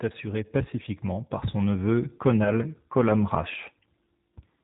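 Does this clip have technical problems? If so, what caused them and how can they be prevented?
Yes. The whole clip runs through the G.729 codec at 8 kbit/s, so everything above 4 kHz is gone and the speech sounds noticeably rough and synthetic, since it's rebuilt from a vocal tract filter, a pitch predictor and a few pulses per frame. Using a wideband codec such as G.722 or Opus would prevent it.

There's also VoIP packet loss concealed by the speech codec from 2.44 to 2.55 s, right after "pacifiquement par son neveu". About 20 ms went missing, and the decoder filled it by extrapolating the last pitch and filter at falling gain, so you hear a short stretched smear, buzzy or noisy, that stays weak or distorted after the packets return. A jitter buffer and forward error correction on the link would help prevent it.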